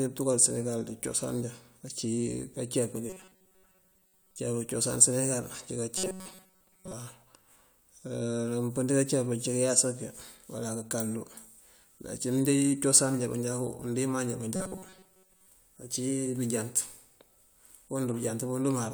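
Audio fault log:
3.10–4.38 s, 5.98–6.93 s and 14.56–15.48 s: robotic sound from repeated short buffers. The speech turns into a rigid, metallic buzz fixed at 188 Hz. Most of the real audio is lost. This is likely from audio arriving too seldom, so a 5.3 ms piece is replayed repeatedly.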